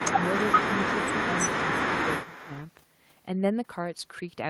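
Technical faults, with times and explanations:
0.02–0.26 s, 0.48–0.58 s and 0.83–2.54 s, speech suppressed in double talk: the speech level repeatedly dips, by as much as about 15 dB in the first stretch and about 10 dB in the later two, and in the long third stretch the dips add up to roughly a second. This is likely an echo canceller hearing the far side talk at the same time, failing to tell the local talker from loudspeaker echo, and turning both down.
2.23–2.63 s, echo leak: a faint delayed copy of the speech, about 20 dB below the direct sound and trailing it by 296 ms, comes back at the end of the last suppressed stretch and just after it. The likely cause is a loudspeaker-side echo canceller that did not fully remove what its microphone picked up from the speaker, so the residue was sent back down the line.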